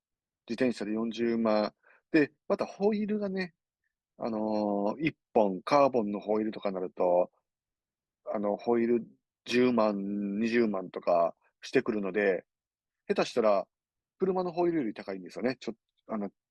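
No technical faults are audible anywhere in the speech recording.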